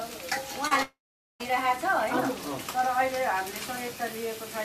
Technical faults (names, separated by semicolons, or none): short concealed packet loss; long network dropout